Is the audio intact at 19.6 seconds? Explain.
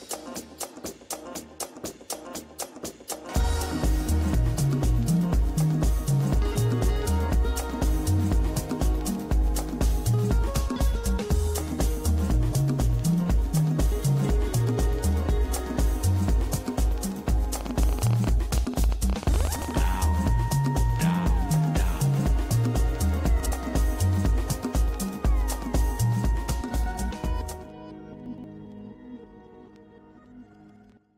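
No. From 17.61 to 19.80 s there is a train of clicks, likely from interference from nearby equipment or a faulty connection or power supply injecting pulses. Around 40 clicks arrive at an uneven pace of about 15.6 per second, reaching about 10 dB above the surrounding sound and heard as popping over it.

Between 19.56 and 19.68 s, chunks are out of order. A 60 ms chunk arrived or was written one chunk late, so it plays after the chunk that should follow it. Nothing is lost, but three hard joins create a brief jumbled moment.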